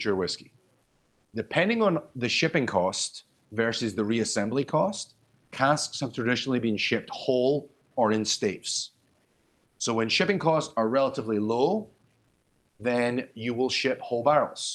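Low bit depth without dither runs throughout the speech. Quiet passages and decaying endings turn gritty, with a grainy distortion that tracks the sound and sits roughly 45 dB below it. This likely comes from truncation to about 10 bits with no dither to decorrelate the rounding error.

Comfort noise in place of the background appears in three pauses: 0.83–1.33 s, 9.25–9.79 s and 12.27–12.79 s. Each time, the real room tone gives way to a flat, featureless hiss about 3 to 4 dB quieter, likely from Opus discontinuous transmission filling the gap with synthetic noise. The speech itself comes through the call path's 12 kHz bandwidth.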